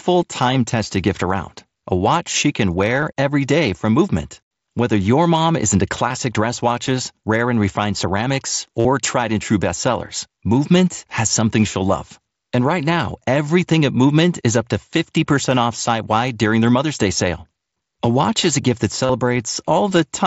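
Concealed Bluetooth headset packet loss occurs at 3.01 s after "a watch she can", at 6.09 s after "your mom is into", from 8.79 to 8.85 s after "rare and refined ceramics", and from 19.05 to 19.09 s. The receiver filled each gap by repeating recent waveform. The two brief gaps last about 15 ms each, while the longer runs give a short buzzy hold and a slight warble on recovery.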